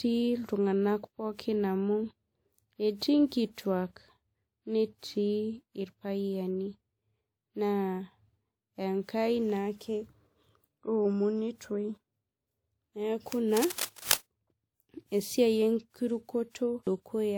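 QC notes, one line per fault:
Throughout: generation loss. The speech sounds swirly, smeared and hollow, with softened consonant attacks, more than a 128 kbit/s WMA stream should. This is likely from about five decode and re-encode passes, each requantising on a shifted frame grid so the damage accumulates. Content stops near 20.1 kHz.
13.57 to 14.20 s: cable scratch noise. A dense, uneven burst of scratching and rustling sits over the speech at about 5 dB below the signal. This likely comes from a worn cable, connector or control being moved, its contact resistance fluctuating rapidly and injecting noise.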